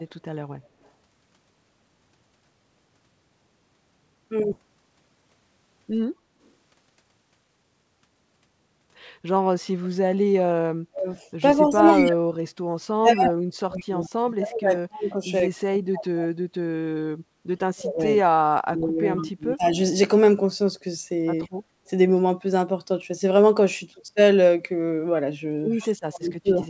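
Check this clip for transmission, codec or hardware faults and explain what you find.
Yes, there are a few. A network jump, two speed-ups, repeated ducking from double talk and a couple of faint echoes, all over a G.722-style band that tops out at 8 kHz.

Skip ahead at 4.52 s: a chunk of audio, roughly 0.7 s, was dropped while later audio was already queued, and the two sides were spliced straight together. You hear an abrupt forward jump with no gap or fill.

Jitter buffer speed-up from 4.61 to 5.30 s and 6.38 to 7.64 s: the buffer was holding more than it wanted, so it trimmed short pitch-period slices to catch up, about a tenth and a fifth of a second in total. The speech runs at 113% with the pitch unchanged, so it sounds hurried.

Speech suppressed in double talk at 10.89–11.17, 11.56–15.29, 15.49–16.70, 17.74–18.02, 18.33–19.77 and 25.82–26.65 s: the voice drops by up to about 35 to 40 dB in pieces. 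The likely cause is the echo canceller ducking everything while both sides talked at once.

Echo leak at 21.42–21.48 and 25.80–25.88 s: brief scraps of a delayed copy of the speech, 131 ms behind it and about 40 and 30 dB down. It's likely residual loudspeaker echo that the loudspeaker side's canceller didn't fully remove and sent back.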